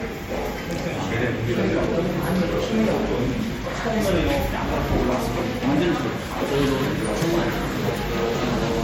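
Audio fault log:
throughout, generation loss: swirly, hollow, smeared, attacks blurred, nothing above 16.5 kHz; likely MP3 re-encoded about four times near 60 kbit/s, damage compounding.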